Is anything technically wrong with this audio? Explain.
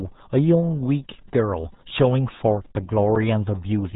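Yes. Throughout the speech, the RealAudio 14.4 codec has left heavy damage. The sound points to a very low-rate coder, around 8 kbit/s, that discards everything above 3.8 kHz. Speech comes out muffled and gargly, with a thin, watery texture.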